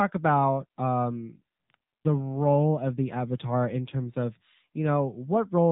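From start to finish the speech runs through an AMR narrowband mobile codec, and the damage is easy to hear. Nothing gets past about 3.7 kHz, so it's dull and phone-like, and the buzzy, synthetic edge fits a low AMR-NB mode around 7.4 kbps.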